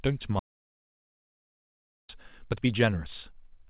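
An audio dropout to silence runs from 0.39 to 2.09 s in this speech recording: the sound stops mid-flow and about 1.7 s of silence follows, with no room tone. The input was most likely lost through a disconnected device, failed link or stray mute while the recorder kept writing silence. A short concealed packet loss follows at 2.67 to 2.70 s, where about 20 ms of audio arrived too late and the receiver patched it by extending the preceding sound for about 11 ms before blending back, leaving a brief smear. Throughout, nothing is heard above 4 kHz, which fits a G.711 mu-law call path at 64 kbps.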